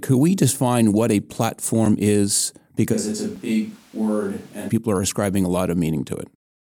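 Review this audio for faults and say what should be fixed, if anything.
There are three short blocks of digital silence, at 1.86, 3.36 and 5.17 s. The last one sits right between "people are" and "a lot". Each is about 5.3 ms of silence, which fits a 256-sample buffer that the audio program didn't fill in time. The abrupt cut out and back in leaves a tick or dip at each gap. To prevent it, give the audio thread more headroom with a larger buffer or less competing load so it never misses its deadline.

From 2.95 to 4.68 s, ending just before "people are", the speech suddenly turns roomy and hollow and loses bass. It drops by roughly 5 dB, and room noise rises to about 30 dB below the speech. That's a switch to a distant microphone, likely because the close mic's signal dropped out and a farther one, such as the camera's, filled in. To prevent it, secure the close mic's connection and battery, and monitor it so a fallback to another mic gets caught during recording.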